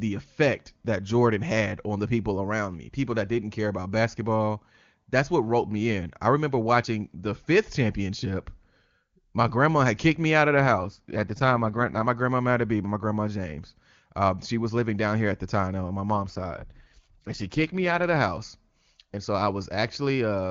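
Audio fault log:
10.57–12.08 s and 16.12–18.03 s, AMR rate drop: after "kicked me out of", and again between "the time on my" and "of the house", the clear wideband speech turns rough and synthetic with no gap or narrowing of the band. This fits the link forcing AMR-WB down from 23.85 to about 8.85 kbit/s, with fewer bits left to model the voice.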